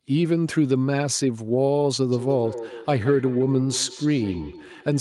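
Feedback echo between two devices runs from 2.12 s to the end of this speech clip: the sound keeps coming back at an interval of roughly 150 ms, thinner and more ringing, peaking about 13 dB below the direct speech. Two devices on the same call sit within earshot of each other, so one device's loudspeaker output is picked up by the other's microphone and sent round again. Neither echo canceller can remove it, because each one only subtracts what its own device plays.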